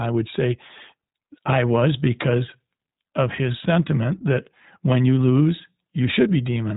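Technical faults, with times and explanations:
Throughout: iLBC codec. The speech is band-limited with nothing above 3.8 kHz, giving a muffled narrowband quality. Each frame's excitation is coded on its own, which leaves a plainly audible rough, synthetic texture, consistent with iLBC's 15.2 kbps mode at 20 ms frames.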